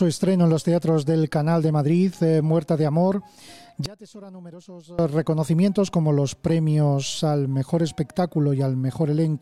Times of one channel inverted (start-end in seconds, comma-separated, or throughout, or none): 3.86-4.99